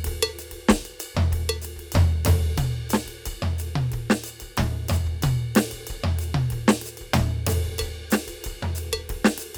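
There are no technical faults to describe at any point in this music.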